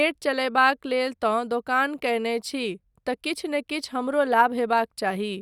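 No technical faults can be heard anywhere in the recording, so there is nothing to describe in time order.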